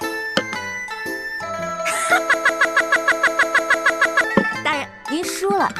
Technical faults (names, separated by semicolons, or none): broken-record loop